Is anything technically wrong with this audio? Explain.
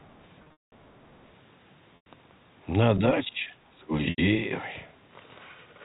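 Yes. Three kinds of fault occur.

Speech suppressed in double talk appears from 0.00 to 0.14 s and again from 3.29 to 3.91 s. The likely cause is that both ends were talking at once and the echo canceller could not tell the local talker apart from the loudspeaker echo, so it pulled the whole microphone signal down. The talker's level sinks by roughly 15 dB in the first stretch and by about 20 dB in the second, which runs for around half a second.

The other side's voice leaking through shows up briefly from 0.03 to 0.07 s and for longer from 1.06 to 1.26 s. The far-end audio played from the talker's loudspeaker likely reached the microphone, and the echo canceller did not strip it out completely. It sits very low, about 40 dB beneath the main speech, as a faint second voice behind the talker.

Packet loss with pitch repetition occurs from 0.44 to 0.72 s, from 1.96 to 2.06 s, and from 4.10 to 4.18 s. 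Audio packets went missing, and the receiver filled each gap by repeating the last pitch cycle and fading it out. The first episode loses 240 ms scattered over 280 ms, with one run of 200 ms. That run fades into a gap before the speech cross-fades back in. The 100 ms and 80 ms gaps likewise fade into silence before the speech cross-fades back in. The lengths fit 20 ms packets.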